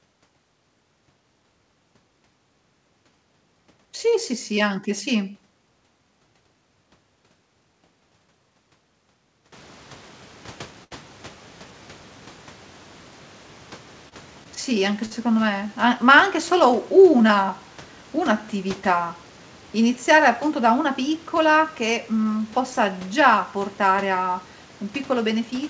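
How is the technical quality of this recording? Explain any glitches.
The speech has three brief hitches, all the same kind of fault: a short stall from a late packet, at 10.84–10.93 s, 14.09–14.14 s, and 15.05–15.13 s, just before "me a ma anche". Each time a packet was late, the jitter buffer ran dry, and the receiver stretched the last sound by 70 ms, 28 ms and 55 ms until the packet arrived. Nothing is lost; a sound just lingers with a slight buzz or dip. On a waveform this is a briefly repeated, flattened stretch, and on a spectrogram a smeared, frozen band. Around 9.5 s the room noise rises by about 23 dB, sitting about 27 dB below the speech, and nothing appears above 8 kHz, consistent with a G.722 call codec.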